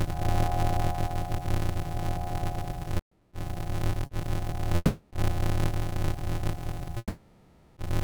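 A block size mismatch (padded) runs through the whole of this music clip. Every block is only partly filled before being read, so the rest is zeros. The result is a steady buzz at about 86.1 Hz and playback at 0.625 times normal speed, with the pitch roughly unchanged. That buzz rate fits a 512-sample read block being fed by blocks of about 320 samples, each topped up with silence.

Repeated stalls (stutter) run from 2.97 to 4.11 s. Four times the incoming audio falls behind playback and the buffer runs dry, and each time the last sound is stretched to cover the wait. The longest hold is about 180 ms, and about 330 ms is filled in all, close to 29% of that span. Nothing is lost, but the music lurches and drags through the passage.

A call audio freeze at 4.76 to 5.13 s holds the last sound and fades it for about 350 ms, then the music carries on from where it stopped. A second, longer freeze from 6.98 to 7.79 s sustains and fades the sound for about 790 ms and touches about 30 ms of silence before resuming, again with nothing skipped. 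The likely cause is packets held up in transit, leaving the jitter buffer empty until they arrive.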